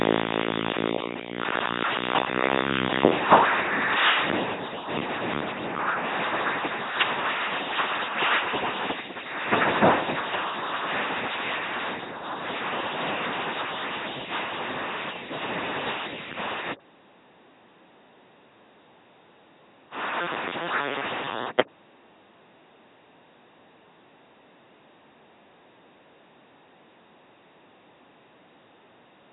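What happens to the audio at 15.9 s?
A buzzing, mechanical robot voice, with no content above about 3.9 kHz, runs through 15.9 s as it does through the whole clip. This is heavy LPC-10 vocoder damage, consistent with the 2.4 kbit/s military coder. Each moment is rebuilt by a short all-pole vocal tract filter excited by either a pulse train or noise, never a mix. The pulses give the buzz, and wrong voicing decisions produce stray buzz or hiss.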